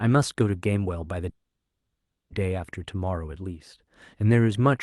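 From 1.29 to 2.32 s there is a call audio freeze. A brief fading buzz or hiss turns to silence. Then speech resumes where it stopped. Delayed packets likely emptied the jitter buffer.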